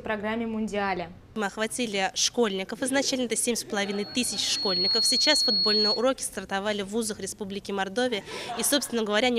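At 3.76 s a thin, piercing tone at 4.3 kHz appears and swells over roughly a second into a steady squeal that sits a few decibels above the rest of the audio, then stops at 6.08 s. This is loudspeaker feedback squeal: the microphone was picking up the loudspeaker it was feeding, and at 4.3 kHz the loop gain exceeded one, so that frequency fed on itself and grew.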